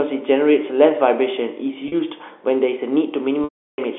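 At 1.88 s, for about 40 ms, there is packet loss with pitch repetition: the receiver bridged the gap by replaying the last pitch period, so the sound briefly holds on a faintly buzzy tone. From 3.44 to 3.78 s a 340 ms loss gets the same concealment, but the repeated period fades out and leaves silence until a cross-fade brings the audio back. Unlike a plain dropout, the gap begins with a held, periodic buzz. Unlike a jitter-buffer stutter, no longer chunk is replayed. Both lengths fit 20 ms packets, heard over a narrowband telephone line.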